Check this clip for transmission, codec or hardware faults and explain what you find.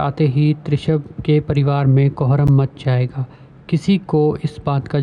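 One fault is audible, a single block of digital silence at 2.47 s. It sounds like a sharp tick, a hole of about 10 ms where the sound drops abruptly to nothing and returns without any fade. That short dropout fits an output buffer that was not filled in time.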